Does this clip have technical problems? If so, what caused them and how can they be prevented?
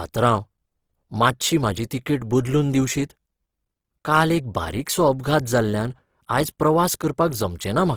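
Yes. The speech has most likely been encoded with Opus compression at far too low a bitrate. Its grainy character points to the music-oriented CELT mode, at a rate around 16 kbps. With so few bits, the encoder keeps each band's energy but fills the detail with folded or noise-like content. The spectrum still reaches 20.3 kHz, yet the speech sounds rough, grainy and hissy throughout the clip, and the damage is plainly audible. Encoding speech at 32 kbps or more, or letting Opus use its speech mode at low rates, would prevent this.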